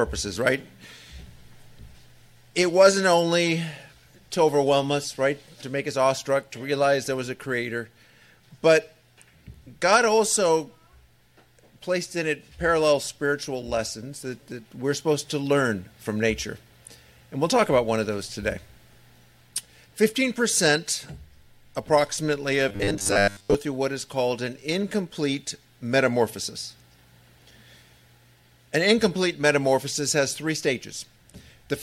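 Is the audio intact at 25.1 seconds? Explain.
Yes, at 25.1 seconds the audio is intact, with no dropout, click, distortion or other fault at that moment.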